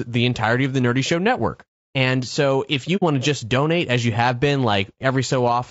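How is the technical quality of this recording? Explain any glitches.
The recording has a constant compression character and one brief gap.

All through the speech the voice sounds rough and grainy, with noise filling the spaces between harmonics and a thin, somewhat synthetic top end. This is likely low-delay AAC compression (AAC-ELD, as in video calls) at a bitrate around 32 kbps. Its short frames resolve pitch harmonics poorly. The graininess sets it apart from the swirly, watery artefacts of longer-frame codecs.

From 2.96 to 3.03 s, between "so if" and "to just donate as", the sound briefly vanishes. This is AAC frame loss with muting, consistent with two lost frames. The decoder zeroed their spectrum, and the overlapping windows fade the sound out and back in. The hole therefore has soft edges, unlike a hard dropout.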